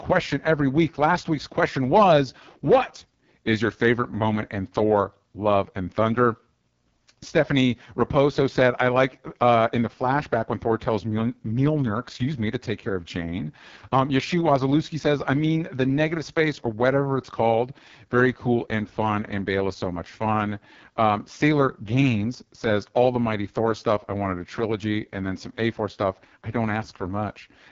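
The speech has passed through the AMR wideband (HD Voice) codec at what sounds like its lowest 6.6 kbit/s mode, so too few bits drive the vocal tract model, leaving the whole clip rough and raspy, with nothing above about 7.3 kHz.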